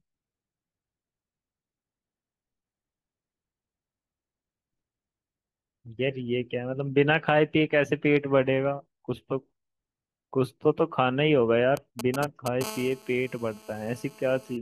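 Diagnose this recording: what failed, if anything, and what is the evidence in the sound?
GSM signalling bursts from 11.77 to 12.63 s: galloping ticks and short 217 Hz buzzes, nearly as loud as the speech. A nearby phone's radio pulses are being rectified in the analogue wiring.

GSM phone buzz from 12.64 to 14.57 s: a steady, raspy 217 Hz buzz about 20 dB under the speech. The phone is now in a call, and the same analogue circuitry rectifies its continuous bursts.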